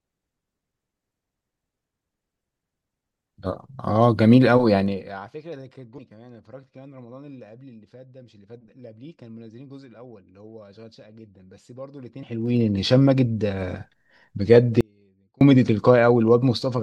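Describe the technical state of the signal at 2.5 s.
At 2.5 s the signal is intact, with no audible fault at that moment.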